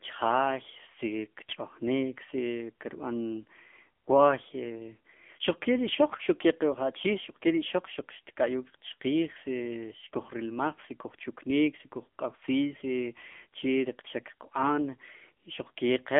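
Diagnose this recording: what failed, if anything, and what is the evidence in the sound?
The speech sounds thin, boxy and plainly buzzy for the whole clip, with a synthetic edge and no air or sibilant brightness. Nothing is present above about 3.5 kHz, and the lows fall away below 200 Hz. These are the marks of the AMR narrowband mobile codec at the codec stage. The telephone-band filtering sets those limits, and the plainly audible buzz from the pulse-driven vocal-tract model points to a mid-rate mode, around 8 kbps.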